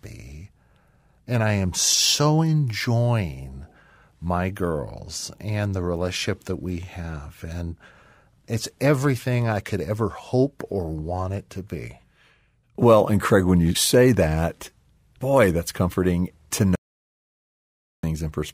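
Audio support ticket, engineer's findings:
Speech cuts off abruptly at 16.75 s into dead digital silence, no room tone, resuming at 18.03 s; about 1.28 s lost. Audio dropout to silence, likely input lost (device or link) while recorder kept writing silence.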